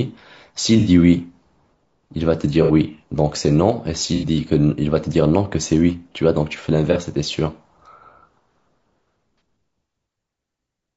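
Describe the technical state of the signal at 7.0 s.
Right around 7.0 s you're just past a short AAC frame loss with concealment, running from 6.92 to 6.97 s. A chunk of the coded stream, roughly 30 ms of audio, never made it to the decoder, so it patched the gap by reusing the last good spectrum with scrambled phase and smoothed energy. You hear it as a brief smeared, noisy, phasey blip in the speech rather than a dropout, and the signal is back to normal decoding by 7.0 s.

Underneath that, the whole clip carries a rough, grainy texture, with noise filling in between the voice harmonics and a thin, somewhat synthetic top end. That's likely low-delay AAC compression, the AAC-ELD flavour used in video calls. It codes only about 500 frequency lines a frame with a low-delay window, and too few bits leaves the spectrum coarsely coded, and the damage here is plainly audible, which fits a low bitrate somewhere around 32 kbps.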